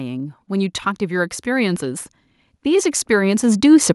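From 0.47 s to the end, the automatic gain rising is audible as the level climbs by about 12 dB. The gain control judged the input too quiet and raised amplification gradually. The speech and the background noise floor swell together, rather than the speech alone getting louder.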